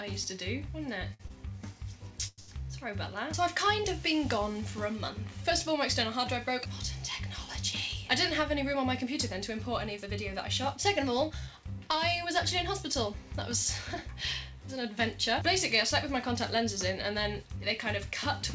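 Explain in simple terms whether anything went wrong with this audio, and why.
A few things went wrong, all from the network delivering the audio unevenly.

The first is a short stall from a late packet, at 1.14 to 1.21 s, 1.27 to 1.32 s, and 2.40 to 2.50 s. Each time, the next chunk of audio hadn't arrived yet, so the receiver held onto the last bit of sound, stretching it by about 55 ms, 22 ms and 82 ms. Then it carried on from the same spot, so nothing is lost. You just hear a sound hang a touch too long, maybe with a faint buzz.

At 2.28 to 2.40 s there's a call audio freeze. The sound turns into a fading buzz and briefly goes quiet for about 20 ms before picking up where it left off, which stretches things by around a tenth of a second. The likely cause is packets getting held up in transit long enough for the receiver's waiting store to run dry. Right after it, the 2.40 s stall adds more hold-up.

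Finally, there's a jitter buffer speed-up from 8.40 to 11.63 s, running about 5% fast, and again from 16.13 to 18.06 s, about 4% fast. Each time, the receiver was holding more audio than it wanted. It caught up by snipping out tiny slivers, roughly 150 ms in total the first time and 70 ms the second. That makes the first stretch sound slightly rushed, but the pitch stays the same.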